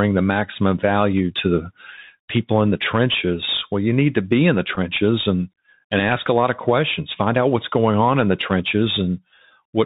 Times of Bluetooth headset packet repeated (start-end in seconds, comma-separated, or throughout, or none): 4.75